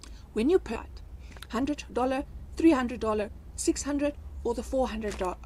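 At 0.75 to 0.77 s the sound lurches abruptly forward, with no gap or fill, as though two unrelated moments had been butted together. This is a skip ahead. About a second of audio never reached the listener, either lost on the way or discarded when an overfull jitter buffer threw away what was queued. Playback then resumed directly at the later material, and the receiver's delay shrank by about a second in one step.

Immediately afterwards, from 0.79 s to 3.29 s, the audio sounds rushed, running at about 115% of normal speed while its pitch stays the same. This is a jitter buffer speed-up. The buffer was still holding more audio than its target, so the receiver repeatedly cut out short slices of one or a few pitch periods to catch up. Across this stretch it removed about 0.4 s, which is why the pacing feels compressed and hurried.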